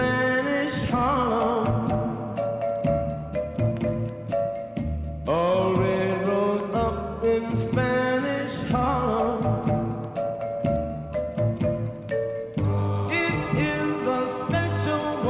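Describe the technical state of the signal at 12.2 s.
At 12.2 s the signal is intact, with no fault present at that point.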